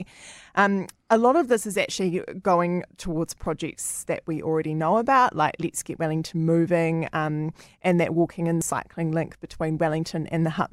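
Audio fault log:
3.46 s and 8.62 s, dropped buffer (overrun): each spot has a small forward jump in the speech and no gap of silence, first between "is actually going towards" and "that we already know", then between "um and that walking" and "cycling link". Roughly 20 ms of sound seems to vanish each time. The likely cause is a capture buffer that was overwritten before it could be read, leaving the audio on either side spliced directly together.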